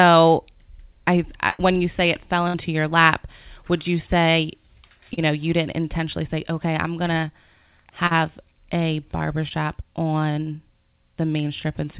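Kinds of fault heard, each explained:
Burst of packet loss: Around 60 to 80 ms of the stream went missing at 1.50 s and again at 2.48 s, between "you say it fell" and "your lap would you". The receiver stretched the last sound across each hole and let it fade, so you hear a held buzz or dying hiss before the speech resumes further on, with that stretch skipped. The length and the audible jump set it apart from the shorter concealed losses.
Short concealed packet loss: At 5.14 s (just before "know you didn't intentionally"), 7.21 s (after "say okay I'm going"), 8.07 s and 9.48 s, only 20 to 40 ms failed to arrive. The decoder invented a continuation from the preceding sound and blended it back in, leaving a brief smear or wobble rather than a held tone and obvious gap. That brevity distinguishes it from the burst losses.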